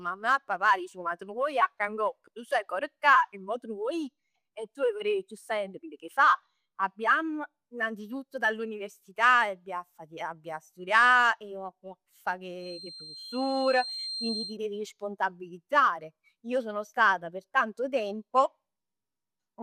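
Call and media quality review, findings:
Feedback whistle 12.55–14.58 s, before "devi responsabilizzare": steady, slightly wavering 4.2 kHz tone about 10 dB under speech; thin horizontal spectrogram line. Likely loudspeaker-to-mic loop at the edge of oscillation.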